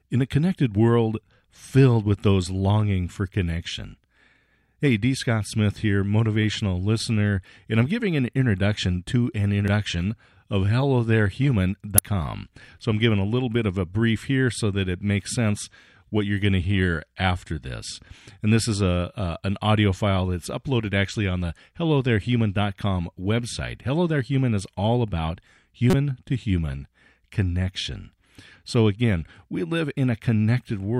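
Damaged data in a compressed stream disrupts this speech three times. The first event is a brief blip at 9.68 s. A second, slightly longer but still brief one follows at 11.98 s. The third runs longer, from 25.90 to 25.94 s, about 36 ms. At each point part of the compressed data was wrong. The decoder misread or rejected those frames, lost sync and hunted for the next frame header. Each disruption is heard as a short chirp, squawk, click or gap in the speech.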